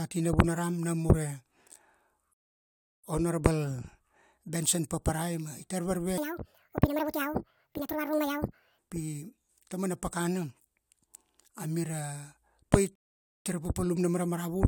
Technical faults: rebuffering stall; section at the wrong speed

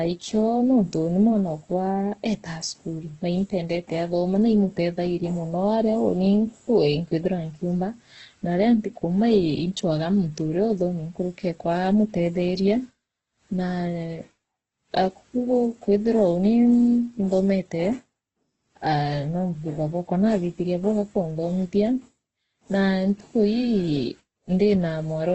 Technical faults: Opus compression

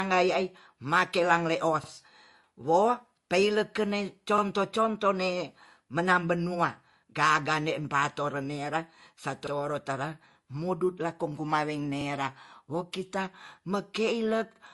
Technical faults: transcoding between lossy codecs; overlapping chunks

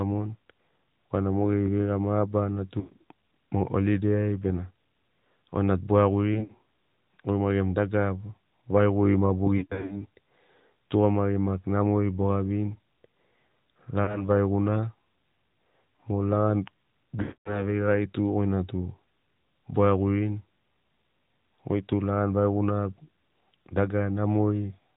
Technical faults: AMR narrowband mobile codec; lost AMR speech frames

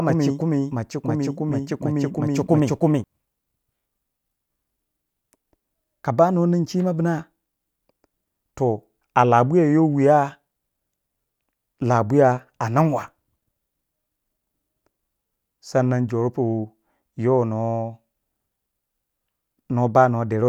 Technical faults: doubled audio track

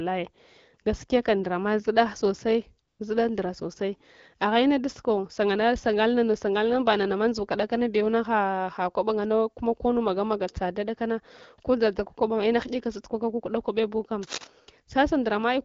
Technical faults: AMR comfort noise; cable scratch noise

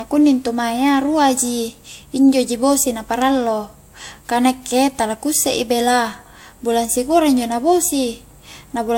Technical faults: transcoding between lossy codecs

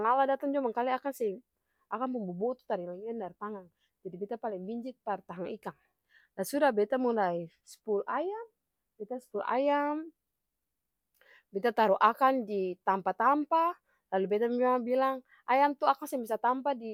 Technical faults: none

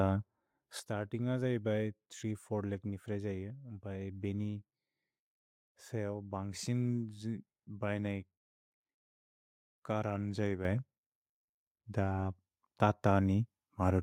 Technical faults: sudden gain jump; microphone volume stepped up

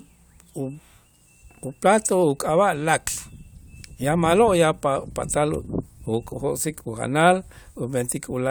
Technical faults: none

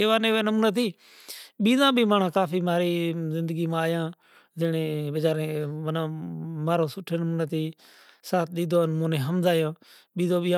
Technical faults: none

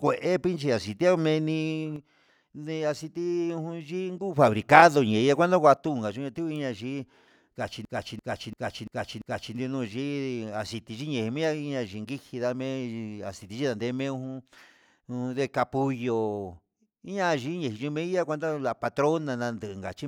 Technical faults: one channel drops out; system hang loop

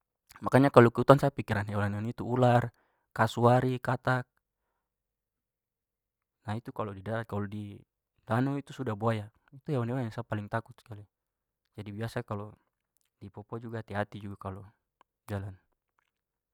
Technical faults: none

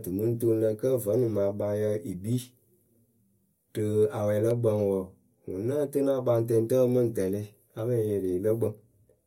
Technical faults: none

